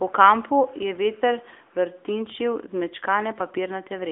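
A speech recording that has passed through the AMR narrowband mobile codec from start to finish. The band is squeezed into a telephone line, roughly 300 Hz to 3.5 kHz, so the voice loses its low body and all of its air above that. The codec rebuilds each 20 ms frame from a vocal-tract model fed by a few pulses. Here that damage is plainly audible as a buzzy, synthetic edge, which fits a mid-rate mode near 10 kbps.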